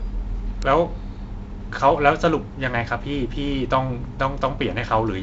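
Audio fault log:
0.62 s, electrical switching spike: a single sharp snap, about 2 ms long, lands on top of the speech without interrupting it. It is likely an arc from a nearby switch or static discharge. Unlike a dropout click, nothing is removed, and its broadband crack is added on top of the wideband telephone sound, which stops near 7.7 kHz.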